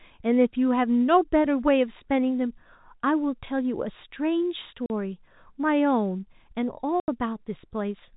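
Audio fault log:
4.86 s and 7.00 s, packet loss filled with silence: holes of 40 ms and 80 ms cut into the speech, which fits two and four lost 20 ms packets. The receiver played pure silence there, so each hole has hard edges.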